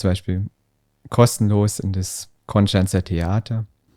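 Throughout the speech, a rough 50 Hz buzz rides on the signal and drops out in pauses. It is the sound of a resampler restarted on every block: each 20 ms block was converted separately, likely from 44.1 kHz to 48 kHz, so every block edge lacked its true neighbouring samples and picked up a small error. A spectrogram shows faint vertical stripes every 20 ms, and the waveform shows tiny steps at each boundary.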